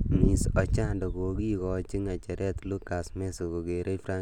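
Speech recording; no technical faults audible anywhere in it.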